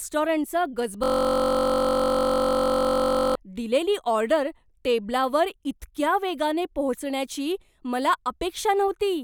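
From 1.04 s to 3.35 s the speech gives way to a system hang loop. The host stalled while the audio hardware kept replaying one 21.33 ms slice, consistent with a 1024-sample buffer, over a hundred times, producing a steady 46.9 Hz buzz.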